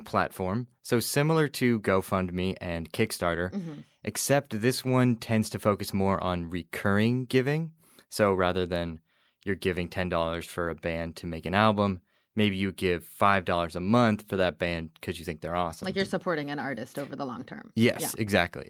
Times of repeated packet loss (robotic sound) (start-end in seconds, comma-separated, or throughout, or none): none